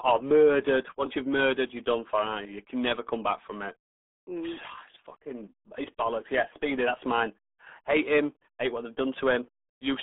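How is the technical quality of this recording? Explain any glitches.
Technical quality is poor, limited by one fault that runs through the whole recording: RealAudio 14.4 codec damage. The speech is squeezed into a band of roughly 250 Hz to 3.5 kHz, with nothing above about 3.8 kHz, so it sounds muffled and thin. Heavy low-rate coding, consistent with an 8 kbit/s dial-up-era speech codec, adds a gargly, watery texture to the voice. The muted pauses drop cleanly to silence between phrases.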